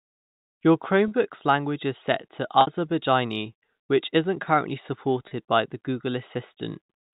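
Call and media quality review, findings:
Packet loss with pitch repetition, 2.61–2.67 s, right after "language is set to": about 60 ms of slightly held, buzzy tone. Jitter buffer or PLC is looping the last pitch period over the gap, which fits two 30 ms packets lost.

Same again at 5.28–5.31 s, after "which is not currently": a 30 ms held buzz, consistent with one dropped packet being concealed. Network drops, not the G.711 path, which comes through with the usual 4 kHz telephone band.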